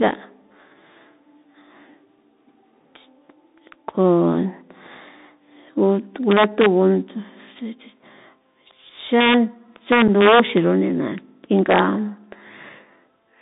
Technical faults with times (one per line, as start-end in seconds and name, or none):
0.00-13.41 Bluetooth CVSD headset codec
6.31-6.66 integer overflow
9.21-9.34 integer overflow
9.92-10.57 integer overflow
10.08 unconcealed Bluetooth headset packet loss
11.71-11.79 integer overflow